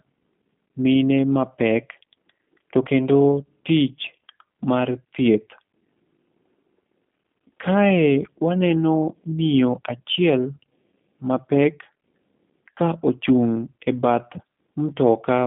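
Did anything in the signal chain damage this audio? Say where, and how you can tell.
Yes, at the codec stage: G.729 coding throughout rebuilds the speech from a model, sounding rough and synthetic; a spectrogram shows nothing above 3.5 kHz.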